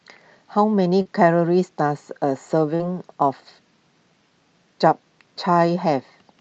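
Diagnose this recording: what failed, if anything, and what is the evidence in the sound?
Short concealed packet loss, a network fault: at 1.01–1.07 s and 2.75–2.81 s about 40 ms of speech never arrived, and the decoder extended the preceding sound to bridge each gap. A buffer dropout would leave silence or a click; here each is a brief smear.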